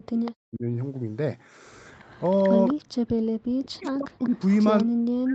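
From 0.02 to 0.65 s the speech dips sharply and breaks up, falling by something like 40 dB at its deepest across roughly half a second in total. This is speech suppressed in double talk, likely caused by both ends talking at once: the echo canceller could not tell this talker's voice from its own loudspeaker echo and turned the whole signal down.

Inside that stretch, at 0.25 to 0.31 s, a short echo leak appears. It is a faint copy of the voice trailing by 194 ms, about 20 dB below the direct speech. The same delayed copy returns for longer from 1.91 to 2.74 s. This is likely an echo canceller on a loudspeaker device that left part of the played-back sound in its microphone signal and sent it back down the line.

Right after that, from 2.75 to 3.37 s, the room sound drops out briefly, about 40 dB deep and totalling around 200 ms. This is background gated by the echo canceller. While the loudspeaker was active, the canceller clamped the microphone hard, so the ambience vanishes and then comes back once it releases.

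From 3.65 s to the end the speech is again pulled down and chopped, by roughly 40 dB at worst. This is another case of speech suppressed in double talk, likely from overlapping talk. Within it, from 4.23 to 4.84 s, the 194 ms echo leaks through once more, at about 25 dB below the speech. The band stops at 8 kHz, as expected from the call's microphone processing.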